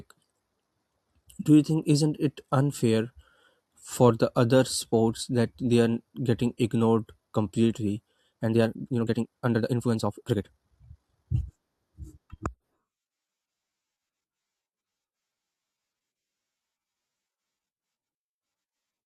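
Speech, with a time-stretched section from 8.28 to 11.50 s, where the pace jumps to about 1.66 times normal while pitch stays unchanged, giving a rushed sound. The likely cause is software squeezing that stretch to fit a length by dropping short pieces.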